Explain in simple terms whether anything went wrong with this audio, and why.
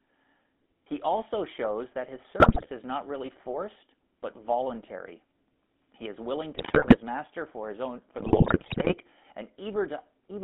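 Two things went wrong. The whole clip of speech has passed through the GSM full-rate codec, the system used by early mobile phones. It rebuilds the voice from a rough model of the throat and mouth, driven by a simplified pulse signal. That leaves a plainly audible buzzy, gravelly edge on every word. The phone line also cuts off everything above about 3.5 kHz and below about 200 Hz, so the voice sounds thin and boxed in.

The second problem is GSM bit errors, from a weak radio link. Some of the digital data arrived scrambled, so the decoder briefly rebuilt the voice with wrong settings. You hear squawks, pops and gargling. The first burst runs from about 2.40 to 2.68 seconds, right after "also shows that his" and before "is not really forced". The second runs from 6.54 to 6.97 seconds, after "is willing" and before "master for his own". The longest comes from 8.18 to 8.96 seconds, just after "master for his own".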